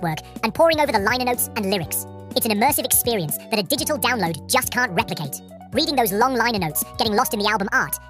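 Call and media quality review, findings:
Wrong sample rate, entire clip. Playback clock at 1.5x capture rate with no resampling, which fits 32 kHz material played out at 48 kHz. Speed and pitch rise together: audio runs 1.5x fast, about 7 semitones sharp, thin and hurried.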